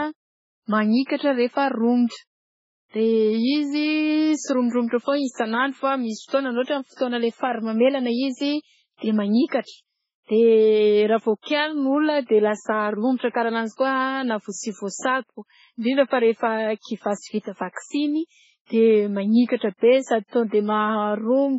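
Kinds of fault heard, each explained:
MP3 compression: The speech sounds watery and swirly, which likely comes from heavy MP3 encoding at a very low bitrate, around 16 kbps. A spectrogram shows a hard ceiling at 7.7 kHz, with isolated bins flickering on and off beneath it.
Pre-echo: Just after "manikatra rehefa", from 2.07 to 2.12 s, a short hiss runs ahead of a sharp onset. The codec spread its noise across the block, so the attack smears backwards by about 50 ms, visible as low-level fuzz before the waveform's jump.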